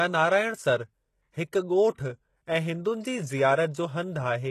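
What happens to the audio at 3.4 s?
At 3.4 s the speech is still passing through what is likely HE-AAC compression, which runs through the whole clip and fits a very low bitrate, around 16 kbps. Only the lower spectrum is properly coded; the treble is rebuilt by copying lower bands upward under a coarse envelope, and nothing reaches above 12.3 kHz. Those copied harmonics fail to line up with the real ones, so s sounds come out heavily gritty, metallic or lispy.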